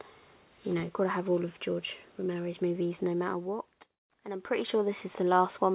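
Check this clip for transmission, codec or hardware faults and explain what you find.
Nothing to report; no faults were found anywhere in the clip.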